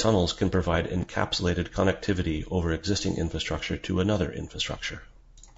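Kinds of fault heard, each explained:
Low-delay AAC compression: the speech sounds rough and grainy throughout, with noise filling the gaps between harmonics and a thin, somewhat artificial top band, likely from AAC-ELD coding at a low bitrate near 32 kbps, whose short frames resolve pitch harmonics poorly.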